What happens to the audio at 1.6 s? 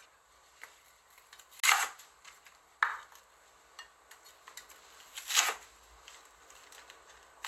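Right around 1.60 to 1.64 s the sound drops out for roughly 29 ms, a short hole, then picks up further along as if it had kept playing. That's most likely a Bluetooth dropout, with a couple of packets arriving too late and being discarded.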